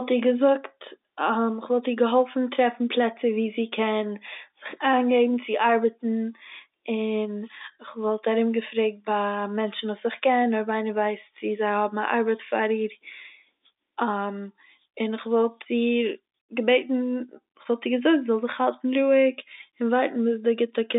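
No technical faults can be heard anywhere in this speech recording. It comes over a G.711 telephone line, so the sound is confined to roughly 250 Hz to 3.7 kHz, with nothing above about 3.8 kHz.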